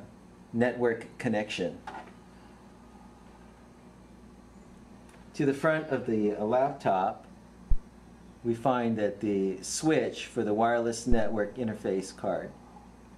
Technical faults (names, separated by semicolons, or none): phantom power thump